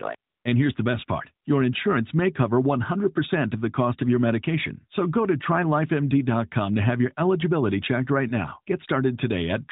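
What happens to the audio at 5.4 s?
Nothing goes wrong at 5.4 s: the speech carries on intact, with the same narrowband mobile-codec character heard throughout, consistent with AMR-NB at 12.2 kbps, and no dropout, glitch or other disturbance at that point.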